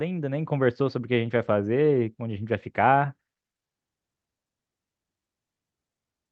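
Speech, with no technical faults to report.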